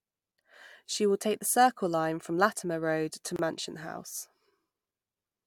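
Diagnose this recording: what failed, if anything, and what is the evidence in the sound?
A gap at a join of encoded pieces opens at 3.36 s and closes at 3.39 s, a silence of about 28 ms cutting into continuous speech. The failure is at the codec stage. The recording was encoded in separate pieces and joined without trimming, so one run's padded final frame and the next run's start-up delay both remain. The sound stops abruptly, the codec softens both edges, and the speech resumes exactly where it broke off.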